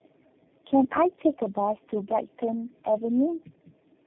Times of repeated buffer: none

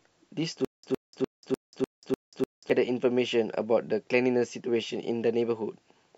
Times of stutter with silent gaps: 0.65-2.70

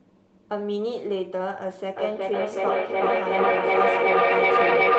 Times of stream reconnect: none

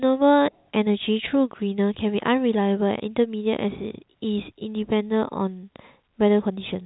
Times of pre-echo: none

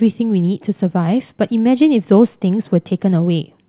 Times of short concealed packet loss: none

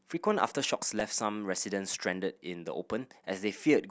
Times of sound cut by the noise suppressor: none

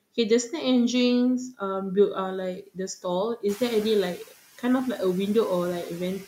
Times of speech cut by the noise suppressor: 2.62-2.79

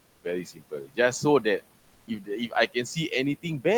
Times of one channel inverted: none

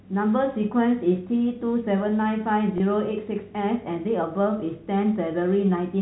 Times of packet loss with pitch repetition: 2.78-2.80

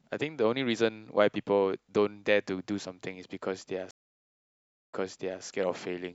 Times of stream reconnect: 3.91-5.43

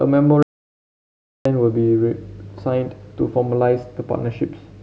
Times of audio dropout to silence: 0.43-1.45

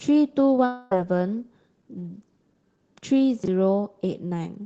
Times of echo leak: none

